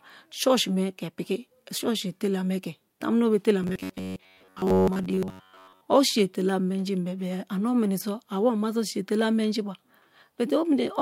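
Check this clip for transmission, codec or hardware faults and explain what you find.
One fault stands out. From 3.63 to 5.82 s the speech turns into robotic sound from repeated short buffers: a rigid metallic buzz fixed near 94 Hz. The likely cause is audio arriving too seldom, so a fragment of about 10.7 ms keeps being repeated while most real audio is skipped. Unlike vocoder-style codec warble, the buzz stays at a fixed rate and follows the speech only roughly.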